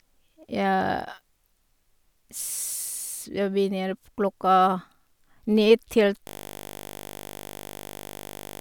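Speech clip with a system hang loop from 6.27 s to the end: the system froze while the hardware kept replaying one 20 ms buffer, turning the audio into a steady 50 Hz buzz.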